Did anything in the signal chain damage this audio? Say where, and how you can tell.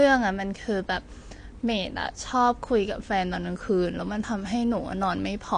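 Yes, at the codec stage, through the whole clip. The speech sounds dull and smeared from start to finish. Nothing is present above about 9.8 kHz, a hard ceiling rather than a natural roll-off. Sibilants turn fizzy and sustained sounds warble. The likely cause is AAC compression, and the damage fits AAC-LC at a low bitrate, around 32 kbps. At that rate the encoder lowers its cut-off and starves the upper bands of bits, leaving gaps and noisy fill.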